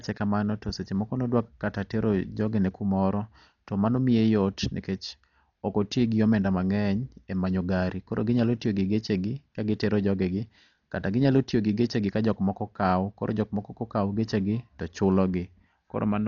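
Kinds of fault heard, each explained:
Dolby Digital compression: The damage is likely from an AC-3 style encoder starved of bits, at a rate the sound suggests is near 40 kbps. To save data it narrowed the band and left many frequency lines with no real detail, which the decoder filled with dither noise. Throughout the speech, nothing is heard above about 6.9 kHz, so it sounds dull, and a rough, fluttering grain clings to the voiced tones.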